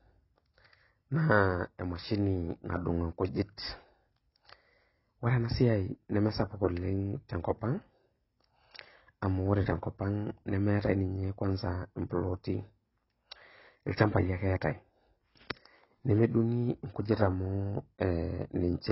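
Throughout, the speech sounds dull and smeared with fizzy sibilants, likely from heavy AAC compression; a spectrogram shows a hard ceiling, nothing above 5.6 kHz.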